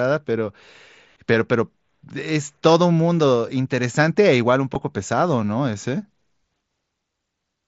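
At 4.74 s there is concealed Bluetooth headset packet loss. About 7.5 ms of speech, consistent with a single lost frame, is patched from recent waveform, leaving only a faint blip.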